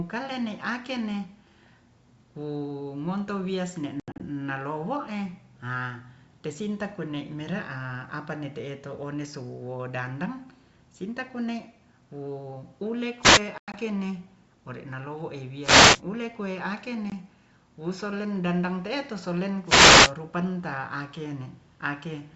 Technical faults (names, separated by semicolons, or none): packet loss on an ADPCM call; wireless microphone noise hit